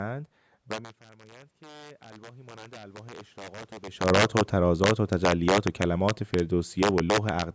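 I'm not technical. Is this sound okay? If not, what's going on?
No. There are three problems.

Throughout the clip, the loudest moments of speech break into sudden, harsh cracks, sharper and nastier than ordinary distortion. This is integer overflow. When the signal briefly goes past the biggest number the system can store, it isn't held at the limit. It wraps around to the opposite extreme, so the sound jumps from full-up to full-down in an instant. Only a small share of the loudest peaks go over, but each one snaps.

From about 0.7 to 3.74 s, the voice and the room noise behind it swell up together, gradually, over roughly three seconds. This is the automatic gain rising. Just before, at around 0.5 s, the talker seems to move back from the microphone, so the voice arrives much quieter. The automatic volume control hears that drop and slowly turns itself up to compensate, lifting the background along with the voice.

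From about 3.97 to 7.5 s, the opposite happens. The sound starts loud and then slowly sinks, with the background sinking too. This is the automatic gain falling. Around 4.0 s the talker appears to come closer again, so the voice suddenly arrives louder. The control is still turned up from before, finds the input too strong, and eases its level back down over several seconds.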